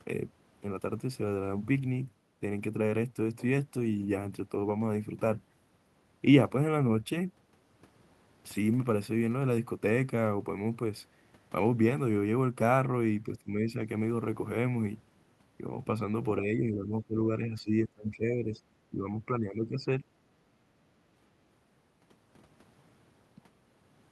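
A speech clip where the talker dips in patches: speech suppressed in double talk. At 13.24 to 13.79 s there's a mild dip of roughly 5 dB, then a heavier stretch from 16.38 to 18.61 s pushing toward 15 dB down, and another from 18.9 to 20.04 s at around 10 dB. It's likely the echo canceller hearing both sides at once and ducking this talker along with the echo.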